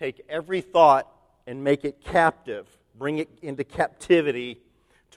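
No technical faults are audible anywhere in the recording; nothing to flag.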